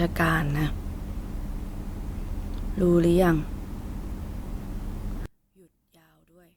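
From 5.26 to 6.57 s, likely one channel inverted: mono summing cancels the shared signal, dropping the speech about 37 dB to a faint trace.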